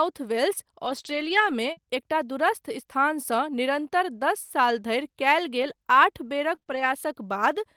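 From 0.85 to 0.99 s, the speech turns rough and grainy but never drops out. This is a lost packet rebuilt from error correction. Several packets went missing. The packets after them carried low-bitrate copies, and the decoder played those copies instead. About 80 ms of speech comes from them, so it sounds coarser and noisier than the audio around it.

At 1.01 to 1.05 s there is a short concealed packet loss. About 20 ms never arrived in time. The receiver filled the hole by extending the last sound, then blended back into real audio. It comes across as a brief smear.

The same error-correction rebuild returns from 1.05 to 1.51 s. This time about 240 ms is played from the low-bitrate copies. The stretch sounds rougher and hissier for nearly half a second.

Another short concealed packet loss follows at 1.73 to 1.79 s. Around 40 ms is missing and patched by continuing the previous sound. 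The result is a short wobble, and a quick consonant there can vanish.

Between 5.63 and 6.86 s come scattered short gaps. About three separate holes appear, the longest roughly 30 ms. Each is patched by continuing the last sound. Concealment covers only a small share of the span, around 7 percent. The speech stays clear apart from brief ticks and hiccups.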